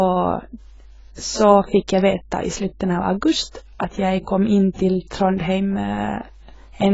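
A steady mains hum runs from start to finish: a low tone at 50 Hz, sitting about 25 dB below the speech. It comes from the power line leaking into the signal path, as through a ground loop or a nearby transformer.

Heavy codec damage also runs throughout, likely from AAC compression at a low bitrate, around 16 kbps. Nothing survives above 7.6 kHz, so the speech sounds dull, and the coarse quantisation of each frame's spectrum leaves a smeared, warbling texture.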